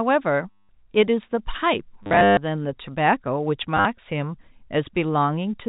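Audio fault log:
0.51 to 0.69 s, packet loss with last packet repeated: about 180 ms dropped in one block, and the receiver kept replaying the last chunk it had, so you get a short robotic stutter with a 100 Hz buzz, which fits 10 ms packets.
2.03 to 2.37 s, packet loss with last packet repeated: 260 ms lost across 340 ms, longest gap 140 ms, so it's a choppier buzz.
3.77 to 3.85 s, packet loss with last packet repeated: a brief flutter, 70 ms lost over 80 ms, with the longest gap 50 ms.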